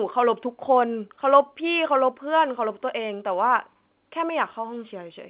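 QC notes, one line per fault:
No faults found in this speech.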